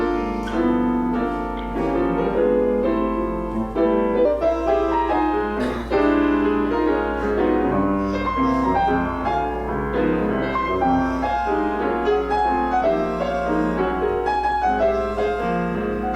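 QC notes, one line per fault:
4.25–16.15 s, section at the wrong speed: playback likely runs against the wrong clock from here on, about 1.19 times too fast, so the sound is suddenly hurried and shifted up by about three semitones, speed and pitch jumping together at 4.25 s and staying raised to the end.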